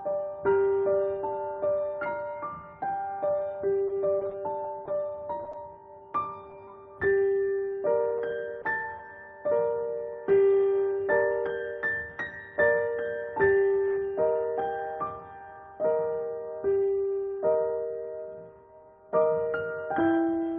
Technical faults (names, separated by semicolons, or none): scattered short gaps